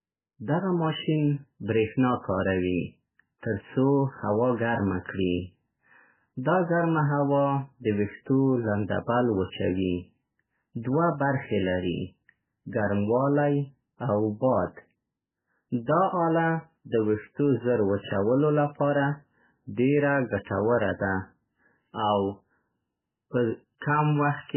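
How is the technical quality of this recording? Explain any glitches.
The technical quality is poor, with heavy damage running through the whole recording. The speech has nothing above 3 kHz, and what remains sounds watery and swirly, with a metallic chirp on s sounds and smeared consonant attacks. This is likely MP3 compression at a very low bitrate, which fits something near 8 kbps. The encoder has cut the treble at a fixed point and is switching weak frequency lines on and off from frame to frame. That flickering is what separates it from a simple low-pass filter, which would dull the sound without the warbling.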